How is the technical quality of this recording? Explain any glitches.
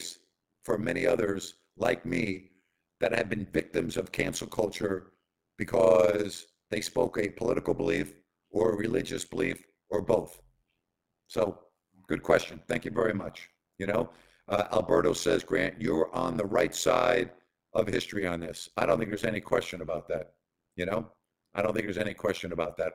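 The recording has a serious technical fault. Throughout, overlap-add ripple from mismatched frame overlap swings the level by about 60 dB around 100 times a second, a metallic buzz with extra tones that stays perfectly regular, unlike irregular dropouts or gain pumping.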